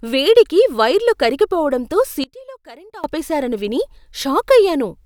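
From 2.24 to 3.04 s the speech collapses about 22 dB into a residue, likely one channel inverted, cancelling in mono; waveform and spectrogram fade.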